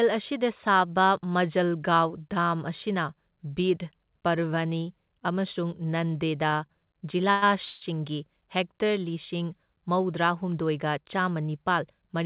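A speech recording, band-limited with nothing above 4 kHz, which fits a narrowband call codec such as G.711 mu-law. At 6.66 to 6.71 s a sound is held a touch too long, about 28 ms, with a faint buzzy smear before the speech carries on without losing anything. This is a short stall from a late packet: the jitter buffer ran dry, so the receiver stretched the last bit of audio until the missing packet turned up and then resumed from the same point. Twice more, at 7.31 to 7.49 s and 7.64 to 7.83 s, the speech hangs on a fading buzz that never drops to full silence, filling about 110 ms and then about 168 ms before the audio picks up where it left off. Nothing is skipped, but each freeze adds a gap to the timing. These are call audio freezes, likely caused by packets delayed in transit that left the jitter buffer empty, so the receiver continued the last sound until delivery resumed.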